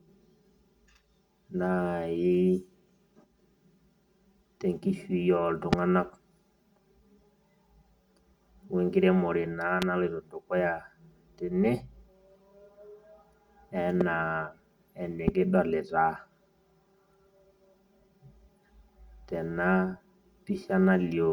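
The whole clip has channel delay comb filtering. One channel trails the other by around 5 ms, and summing them to mono cancels the shared sound in evenly spaced notches starting near 100 Hz. That gives the speech a hollow, phasey quality from start to finish.

On top of that come four single loud pops, at 5.73–5.75 s, 9.82–9.84 s (right before "naloito dukuya"), 14.01–14.03 s and 15.28–15.30 s. Each is a sharp click about 20 dB above the speech, which carries on underneath. The likely cause is a voltage spike from a switch, static or a driver glitch.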